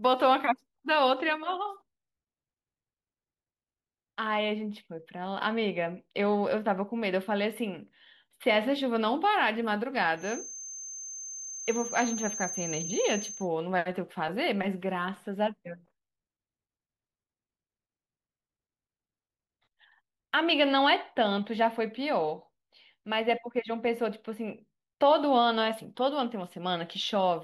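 From 10.14 s to 13.49 s, a feedback whistle sits behind the speech. It is a thin, steady tone at 6.3 kHz, roughly 10 dB below the voice. Its level swells and fades slowly. The likely cause is a loudspeaker-to-microphone loop hovering just at the edge of feedback. At that edge, one high frequency keeps ringing without running away into a howl. The whistle then stops at 13.49 s.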